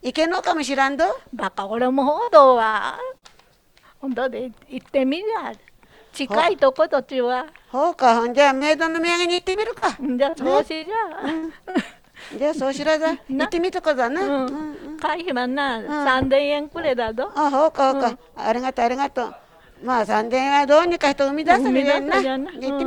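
From 2.23 to 3.25 s, and again from 8.58 to 11.77 s, the audio turns choppy, with pieces missing and short holes of up to 50 ms and 76 ms. This is repeated packet loss (robotic sound): packets kept going missing, and each gap was patched by stretching the last sound, covering about an eighth of each stretch.

Between 13.31 and 14.44 s the sound runs faster, about 4% fast, with the pitch unchanged. This is a jitter buffer speed-up: the receiver held too much buffered audio and cut short pitch-period pieces, roughly 50 ms in total, to reduce the delay.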